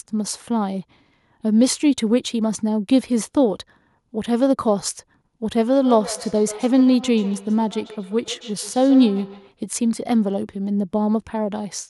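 Feedback echo between two devices, 5.8 to 9.55 s: a second device replays the speech into a nearby microphone, so each word returns roughly every 150 ms, about 16 dB below the speech, thinner and ringing.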